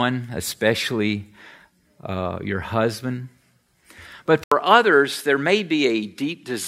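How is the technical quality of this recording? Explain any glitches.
The recording has one clear glitch late on. At 4.44 s the input likely switched to a poorer device: after an 80 ms gap, the speech loses everything above 13 kHz, comes back a few decibels quieter, and sits on a faint new background hiss through to the end.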